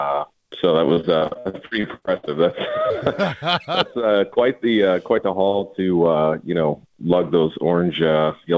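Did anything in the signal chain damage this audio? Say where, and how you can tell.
Yes: repeated packet loss (robotic sound) from 0.94 to 2.29 s, a network-stage fault. The stretch breaks into fourteen short holes, the longest 61 ms, and about a third of it is patched by stretching the previous sound forward. That concealment fills roughly 450 ms, giving the choppy, robotic texture, and a further 440 ms is simply missing. The audio came through a G.722 call path at 64 kbps, which has nothing above 8 kHz.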